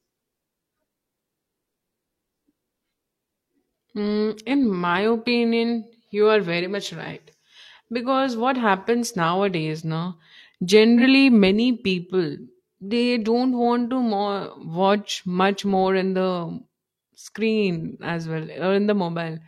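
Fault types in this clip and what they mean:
AAC frame loss with concealment: around 10.97 s, just before "many people", a gap of about 43 ms, which fits a single lost frame, is filled from the preceding spectrum. It sounds like a brief smeared, phasey patch rather than the silent hole or click of a plain dropout.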